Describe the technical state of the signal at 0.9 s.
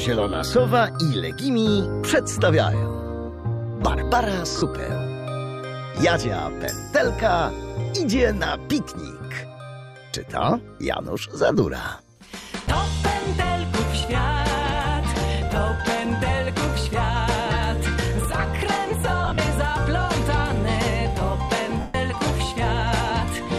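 At 0.9 s the signal is intact, with no audible technical fault at that point.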